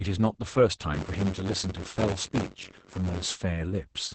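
A speech clip carries heavy Opus voice compression throughout. Nothing survives above 8.6 kHz, so the voice sounds muffled, hoarse and slightly robotic. The damage points to the SILK speech coder at a low rate near 10 kbps. From 0.93 to 3.27 s there is buffer tearing. A steady robotic buzz at 93.8 Hz rides on the speech. In each buffer, roughly a tenth of the audio is left over from about 20 ms earlier, with hard joins on both sides. The buzz rate fits a 256-sample buffer.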